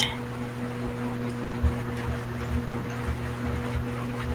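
A brief smear and wobble occurs at 1.43–1.47, 1.47–1.51 and 1.51–1.55 s, and again at 2.67–2.71 and 2.71–2.75 s. These are short concealed packet losses. Each time, 20 ms of audio arrived too late, and the receiver bridged the gap by extending the preceding sound before blending back.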